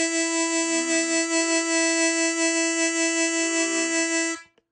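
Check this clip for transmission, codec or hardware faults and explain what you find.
One fault, and it runs through the whole clip: AAC compression. Nothing survives above 9.5 kHz, so the music sounds dull and plainly smeared. That's likely AAC-LC throwing away detail to fit a low bitrate, around 32 kbps.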